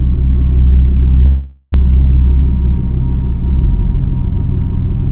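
Audio carried over a narrowband call path, with nothing above 4 kHz, has a long network dropout, likely, from 1.26 to 1.76 s: the last sound is stretched into a fading buzz, about 400 ms goes missing, and timing shifts slightly. On a spectrogram this shows as a smeared, decaying band ending in a brief near-blank gap.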